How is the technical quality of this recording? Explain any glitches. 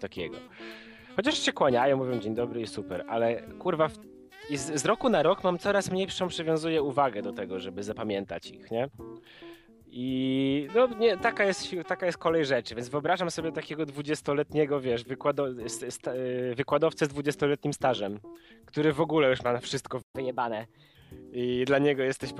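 Two linked glitches occur near the end, at about 20 seconds.

From 20.01 to 20.15 s there is a playback stall. The player most likely ran short of data or had its output thread blocked, so the sound cuts to silence for 120 ms before resuming.

From 20.15 to 20.95 s comes catch-up at higher speed. The player resamples its backlog at 1.15 times normal speed to recover the lost time, so the sound runs faster and about two semitones higher before dropping back.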